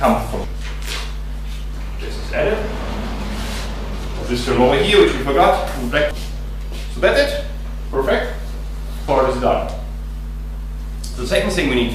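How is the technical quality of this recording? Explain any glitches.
Three short glitches break up the audio, at 0.44 s, 6.11 s and 9.08 s. All three are damaged data in a compressed stream. At each point, part of the encoded data was corrupted or lost. The decoder could not read those frames properly. It lost sync and had to hunt for the next valid frame header before playback resumed. Each event is heard as a brief disruption, such as a chirp, squawk, click or short gap, with the sound possibly jumping ahead.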